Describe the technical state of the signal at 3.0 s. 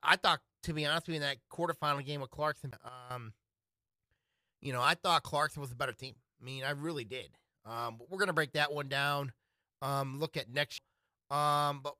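At 3.0 s a sudden gain jump is under way, from 2.89 to 3.11 s. The digital gain was likely switched in a single sample with no ramp, dropping about 12 dB. Speech and background noise fall in level together, then return abruptly.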